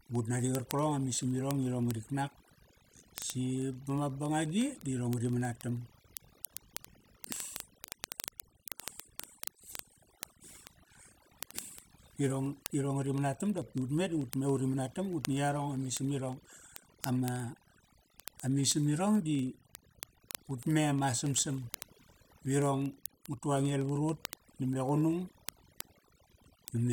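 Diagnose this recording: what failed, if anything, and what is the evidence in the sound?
Overdone noise removal runs through the whole clip, a processing-stage fault. The background falls to near silence with twinkling specks, because the reducer pulls individual frequency bands down near its noise estimate and strips quieter speech detail with them.

Word clock ticks run from 0.11 s to 26.92 s, a digital-interface clocking fault. Sharp ticks of uneven strength recur about every 40 ms as an unlocked receiver clock slips against the sender's, dropping or repeating one sample each time, which points to a mismatch of roughly 500 ppm.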